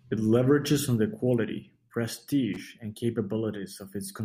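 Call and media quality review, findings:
Loose connector crackle, 2.54 to 2.61 s. Short irregular burst of scratchy crackle, about 70 ms, cutting across the speech. Probable component: worn or dirty plug or jack contact in the analogue path. Mechanism: contact rapidly opens and closes under movement, chopping the signal on and off; any DC on the line turns each make and break into a pop. Check and reseat or replace the cable connector.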